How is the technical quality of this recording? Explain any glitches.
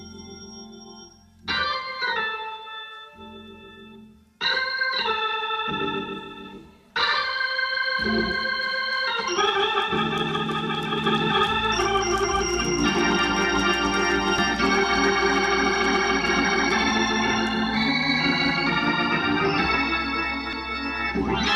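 Two brief glitches stand out, at 14.38 s and 20.53 s, both from damaged data in a compressed stream. At each point part of the encoded stream was corrupted, so the decoder misread the affected frame and lost sync until it found the next valid frame header. Each is heard as a chirp or click lasting only a few milliseconds. On a spectrogram each appears as a thin vertical smear across many frequencies, and on the waveform as a short irregular spike or discontinuity.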